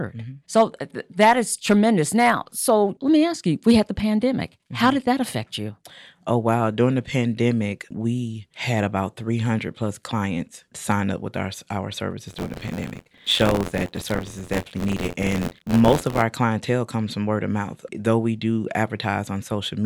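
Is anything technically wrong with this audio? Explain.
Yes. Buffer tearing runs from 12.27 to 16.23 s, after "up with our our" and before "clientele comes from word". About a tenth of each buffer replays audio roughly 40 ms old. This causes an 86.1 Hz robotic buzz, which fits a 512-sample buffer.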